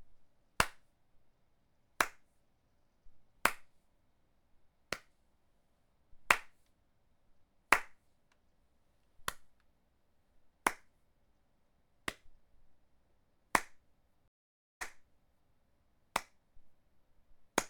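A stream reconnect breaks this recording of sounds from 14.28 to 15.52 s: after 0.51 s of silence a fresh decoder resumes playback 0.73 s earlier, repeating material.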